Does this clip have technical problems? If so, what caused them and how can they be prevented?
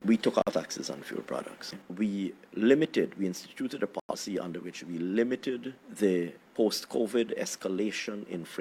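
Yes. The sound cuts abruptly to silence from 0.42 to 0.53 s and from 4.00 to 4.15 s, each gap fitting two lost frames. This is corrupt frame muted: the decoder rejected bit-damaged compressed frames and the player substituted silence. Checksummed transport with retransmission or error correction prevents it.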